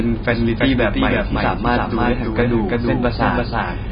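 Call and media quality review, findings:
Doubled audio track, whole clip: a second capture path or misaligned edit likely mixing the same signal in twice. Full-band copy at roughly equal level, around 300 ms behind, with no decay or room colour, so speech is heard twice, about 300 ms apart.

AAC compression, whole clip: heavy AAC-LC damage, likely a very low bitrate consistent with about 16 kbps. Nothing above 5 kHz, so speech is dull, with a warbling, fizzy texture on sibilants and sustained sounds.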